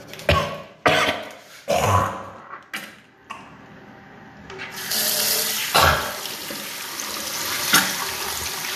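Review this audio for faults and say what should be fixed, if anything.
Nothing here needs fixing, since the signal carries no audible technical faults anywhere in the clip.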